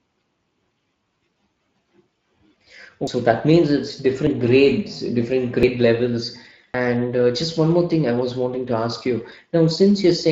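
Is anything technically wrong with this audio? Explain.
Yes. Throughout the speech there is a coarse, hoarse, noisy texture, clearly audible damage from the Speex codec. Its CELP model has too few bits to rebuild the excitation finely, and the bitrate is around 20 kbps.

There are also four jumps in the sound. They fall at 3.07 s, just before "that means it's"; at 4.27 s, between "that means it's" and "grades different"; at 5.63 s, just after "grades different"; and at 6.74 s. These are likely dropped buffers (overrun). Samples were overwritten before being read, so roughly a tenth of a second vanishes each time, a little more at 6.74 s, and the two sides are joined directly with no gap.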